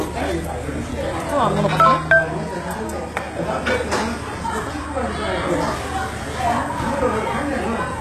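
Throughout, the treble sounds gritty and metallic, with nothing above 12.3 kHz, likely from HE-AAC compression at a very low bitrate; a spectrogram shows copied, blocky upper bands.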